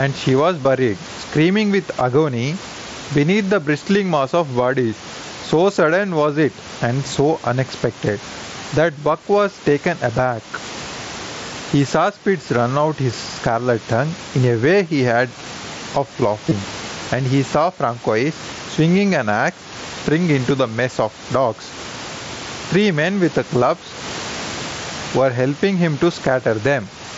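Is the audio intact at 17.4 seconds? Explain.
No. Around 17.4 seconds there's gain pumping, and it runs through the whole clip rather than just that spot. The level keeps lurching by something like 15 dB. Loud and soft parts sit squashed together. The likely cause is input gain set far too high, with a fast limiter or compressor clamping down on each peak.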